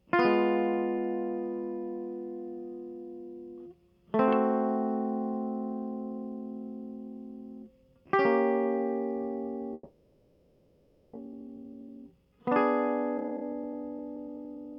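From 9.73 to 11.17 s the music gives way to a fading buzz. This is likely a long network dropout. About a second of music is lost for good.

A jitter buffer speed-up follows at 11.26–12.40 s and 13.18–14.73 s. Tiny pieces are trimmed. Playback runs about 11–12% fast at unchanged pitch, and the tempo wavers.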